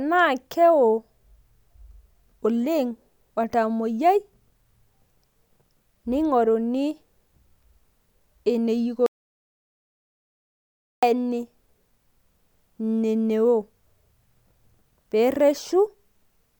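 At 9.06 s the speech cuts off mid-flow into dead silence, with no room tone, and returns abruptly at 11.03 s, so nearly two seconds are lost. This is an audio dropout to silence, likely from the input briefly disconnecting while the recorder kept writing silence.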